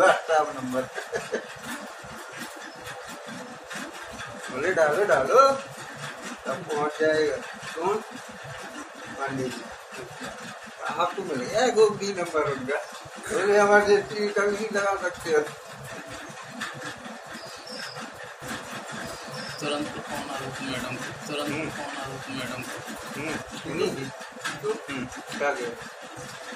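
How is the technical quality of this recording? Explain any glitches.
There's one real glitch: a doubled audio track from 18.42 to 23.42 s. A second, equally loud copy trails about a second and a half behind, with no decay or room colour, and cuts in and out abruptly. It's likely a slower capture path or an edit leaving two out-of-step copies.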